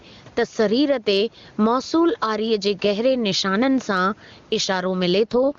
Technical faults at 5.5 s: gain pumping; AMR rate drop

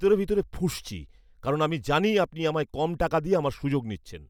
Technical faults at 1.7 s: none

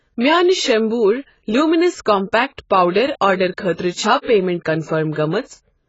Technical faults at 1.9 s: AAC compression

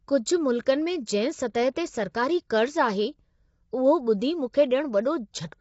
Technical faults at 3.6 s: low-delay AAC compression

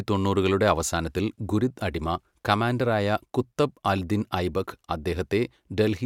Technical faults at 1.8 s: none

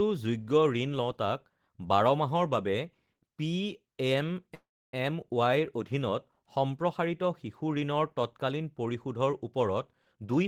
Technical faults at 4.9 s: call audio freeze

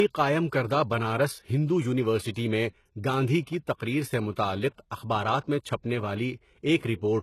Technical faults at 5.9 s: low-bitrate audio saved at a high bitrate

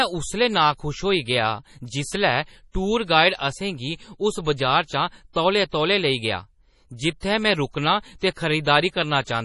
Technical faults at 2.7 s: MP3 compression

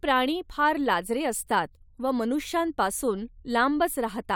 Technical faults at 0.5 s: none

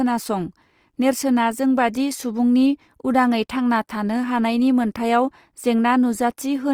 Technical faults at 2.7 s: Opus compression

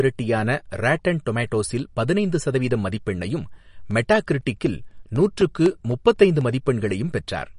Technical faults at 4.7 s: MP3 compression; periodic USB or driver dropouts

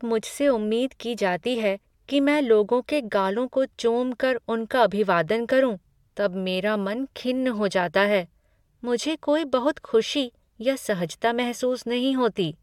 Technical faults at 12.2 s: none

